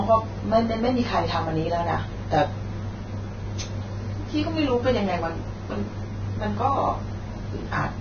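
From start to finish the speech carries heavy codec damage, likely from Vorbis compression at a low setting; the degree of loss fits a bitrate somewhere near 18 kbps. Nothing is present above 6.5 kHz, so the top octave is simply gone. Below that cut-off the treble has been quantised so coarsely that fine spectral detail is replaced by noise of similar energy, giving a hissy, grainy texture, roughened tonal parts and softened, smeared consonant onsets.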